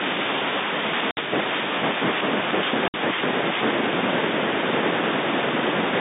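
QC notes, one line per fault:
1.11–1.17 s and 2.88–2.94 s, packet loss filled with silence: the speech drops to silence for 60 ms each time, which fits two 30 ms packets lost in a row. The cut-outs have hard edges rather than the smeared repeats or fades of concealment, and the G.711 line band of about 200 Hz to 3.7 kHz continues unchanged on either side.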